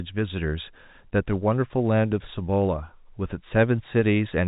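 A speech recording, carried over G.711 telephone coding with nothing above 3.8 kHz. Faint clock slip clicks tick from 0.80 s to 3.80 s. About four come, roughly one each second. Each is a single dropped or repeated sample. The likely cause is two unsynchronised device clocks, differing by about 20 ppm.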